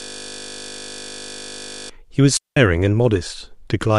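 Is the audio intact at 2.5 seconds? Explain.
No. At 2.5 seconds the sound sits inside a digital wireless dropout that runs from about 2.37 to 2.57 s. The radio link lost too much of its data stream for the receiver to rebuild the audio, so the receiver muted its output for roughly 197 ms, fading down and back up almost instantly. The speech simply stops for that fifth of a second, leaving a clean pocket of near silence with no crackle, hiss or burst at either edge.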